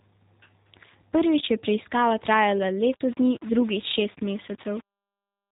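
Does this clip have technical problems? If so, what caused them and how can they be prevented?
Yes. The speech carries G.729 codec damage throughout. Nothing above 3.8 kHz survives, and the voice sounds rough and synthetic, which fits an 8 kbit/s G.729 stream rebuilding speech from a modelled vocal tract and sparse pulses. Prevent it by using a wideband codec.

From 2.81 s to the end, just after "je preiskava trajala", the sound turns grainy. The grit follows the speech, sitting roughly 25 dB below it. The likely cause is low bit depth without dither, with rounding to about 6 bits. Keep at least 16 bits and apply dither when reducing.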